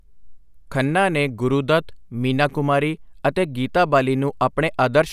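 Listening closely to the speech, nothing stood out as a technical fault at any point.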